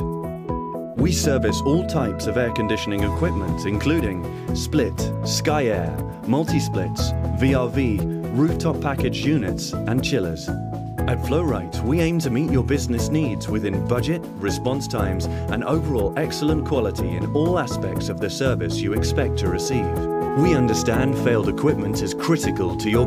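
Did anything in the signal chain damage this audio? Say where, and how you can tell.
Yes. At 17.1 s the codec stage loses compressed frames: the audio jumps forward by about 20 ms, which fits whole frames that were missing from the stream or rejected by the decoder as damaged. The lack of any silent hole separates it from a buffer dropout or a sample-level discontinuity.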